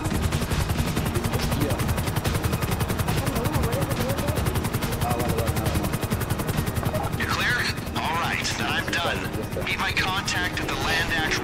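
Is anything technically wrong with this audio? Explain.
No, nothing technically wrong turns up here; the audio sounds fine all the way through.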